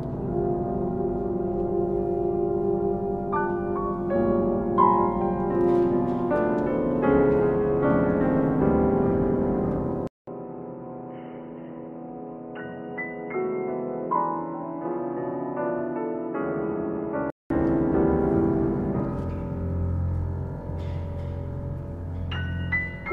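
At 10.07 s a 200 ms silence precedes an abrupt change in tone until 17.50 s: nothing above 3 kHz, a few dB lower in level, and a new noise floor well below the signal. This points to an input switched to a poorer device, likely a narrowband microphone or headset profile.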